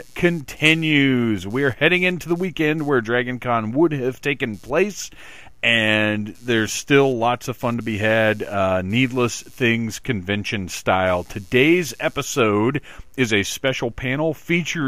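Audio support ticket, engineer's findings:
Computer activity noise, present throughout the speech clip. Buzzy pulsing at around 150 Hz, roughly 35 dB below the speech level, independent of the speech itself. Probable component: the shared ground between the computer and the audio interface or input stage. Mechanism: processor, graphics or mouse load changes shift the ground reference, so the load rhythm leaks into the signal path as buzz and chirp.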